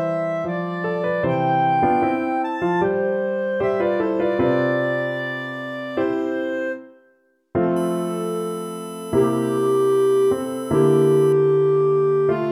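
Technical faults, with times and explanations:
7.76 to 11.33 s: USB whine. A steady, fixed-pitch tone sits on a 1 kHz fundamental with harmonics, the strongest at 11 kHz, roughly 25 dB below the signal. The 1 kHz spacing matches 1 ms USB frames leaking through power or ground. Mains hum, by contrast, sits far lower at 50 or 60 Hz multiples.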